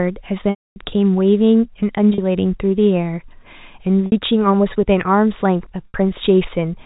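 Packet loss with pitch repetition occurs four times. From 0.50 to 0.76 s, 260 ms is lost. The repeated pitch period fades to silence, then speech cross-fades back. Gaps at 2.14 to 2.18 s, 4.06 to 4.12 s and 5.89 to 5.94 s sound briefly held and buzzy.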